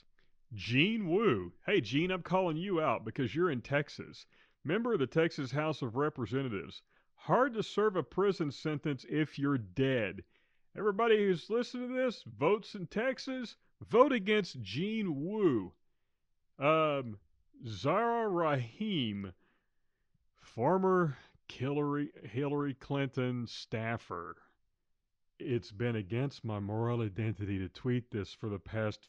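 No technical faults can be heard anywhere in the recording.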